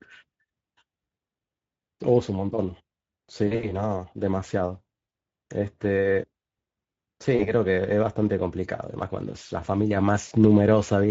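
Speex codec damage runs throughout, leaving the speech hoarse and grainy, which fits a mid-rate setting near 16.8 kbps. A spectrogram shows smeared harmonics under a noisy haze. VoIP packet loss concealed by the speech codec strikes at 3.47 to 3.87 s, 5.09 s, 7.35 to 7.52 s and 10.27 to 10.33 s. The decoder stretches the last sound into a buzzy tone or coloured noise that fades, seen as flat, decaying stripes.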